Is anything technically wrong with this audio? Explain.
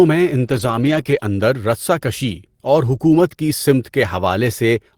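Yes. Between 0.47 and 1.01 s there is a lost packet rebuilt from error correction: lost packets were replaced by low-bitrate copies carried in the following packets, so about 280 ms of speech sounds rougher and noisier, without gaps. The same repair recurs from 1.07 to 1.21 s, covering about 80 ms.

Between them, at 1.03 to 1.07 s, is a short concealed packet loss. About 20 ms arrived too late, and the decoder extended the preceding sound for about 15 ms, producing a brief smear or wobble.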